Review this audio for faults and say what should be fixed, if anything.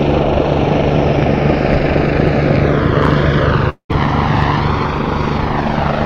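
A long network dropout runs from 3.69 to 3.91 s. The audio is stretched into a fading buzz for about 200 ms, and roughly 100 ms of silence is part of that stretch. When the sound returns, about 200 ms of material is missing. It does not pick up where it stopped. This pattern points to a likely burst of lost packets, with the receiver filling the gap and then falling quiet. To prevent it, use a more reliable link or add forward error correction with a larger jitter buffer.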